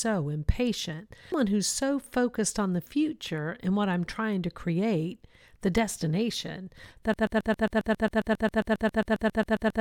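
Speech, with two faults. At 1.32 s there is a brief glitch from damaged data in the compressed stream, where the decoder misread frames and lost sync. From 7.14 s to the end, a broken-record loop repeats one 135 ms fragment twenty times. The stream likely stalled and kept resending its last piece, so the speech that belonged there is lost.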